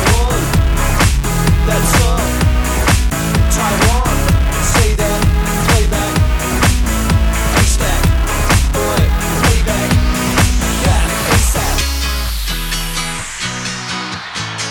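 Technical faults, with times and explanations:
No technical faults can be heard anywhere in this audio. Nothing in it calls for a time or an explanation.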